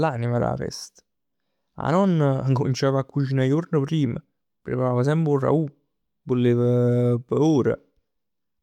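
No technical faults can be heard anywhere in this speech recording.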